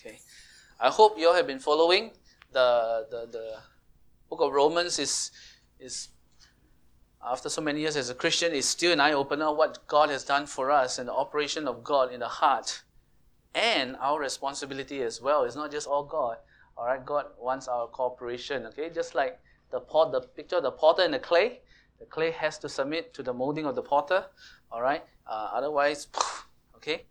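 From 15.89 to 23.82 s, wrongly applied de-emphasis rolls the treble off smoothly, about 13 dB down at 10 kHz, leaving muffled sound and a visibly darkened spectrogram top.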